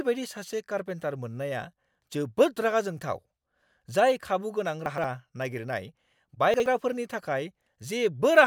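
Chunks out of order at 4.86–5.04 s, just after "जाय खाबुगोनां", and at 6.54–6.66 s. A 60 ms piece of speech plays two slots late in the first case and one slot late in the second. Nothing is lost, but the misplaced piece creates three hard joins, heard as a brief jumbled stutter.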